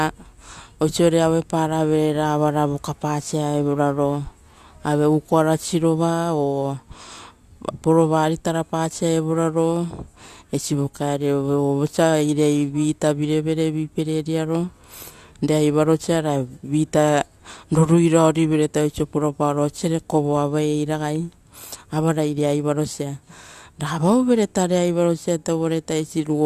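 No technical faults can be heard anywhere in this recording.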